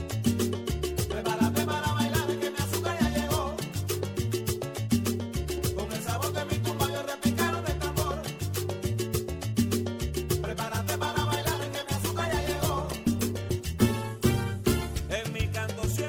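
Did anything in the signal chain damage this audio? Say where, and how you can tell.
Yes. A call bitrate drop hits at the codec stage, driven by the network, from 11.03 to 15.19 s. The audio turns coarse and muffled, with the top end gone, consistent with the encoder falling from roughly 96 to 17 kbps. It stays continuous without dropouts, so this is starved encoding rather than packet loss.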